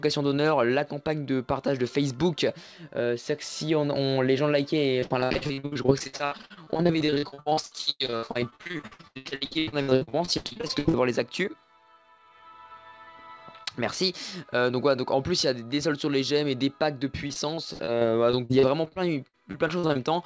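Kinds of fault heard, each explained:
Repeated packet loss (robotic sound): Audio packets kept going missing, and each hole was filled by stretching the last sound. From 5.0 to 10.95 s about half is patched, with gaps up to 92 ms, so it turns choppy and robotic. A lighter bout follows from 17.27 to 19.97 s.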